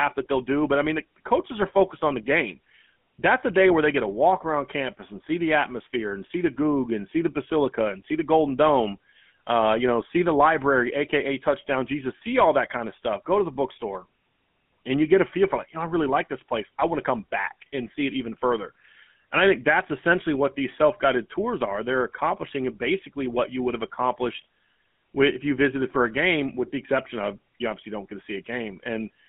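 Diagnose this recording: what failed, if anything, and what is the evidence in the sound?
The codec stage failed: the speech runs through a GSM full-rate codec for its whole length, confined to roughly 150 Hz to 3.5 kHz and with a plainly audible buzzy, gravelly roughness, which fits 13 kbps. Pulse-driven excitation produces that rasp, which mere band-limiting or filtering wouldn't.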